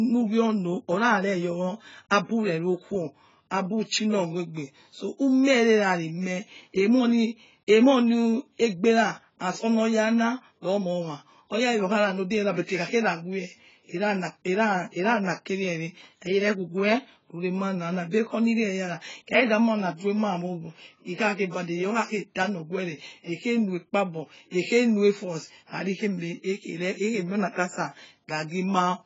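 It's a speech clip with heavy codec damage the whole way through. Nothing gets past about 7.6 kHz, so it sounds dull, and the sibilants and held sounds have that smeared, warbly, fizzy texture. That's likely AAC compression, AAC-LC pushed hard. The encoder cut the top band and quantised what's left coarsely against its hearing model. The damage fits a bitrate down around 16 kbps.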